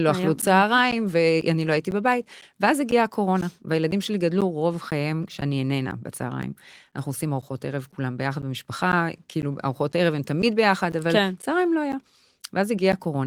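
From 0.42 s to 12.93 s the speech has periodic USB or driver dropouts: every 0.5 s a blocked bus or driver loses about 10 ms, filled with silence, giving roughly thirty ticks. Their strict spacing, heard only during sound, separates them from random clicks.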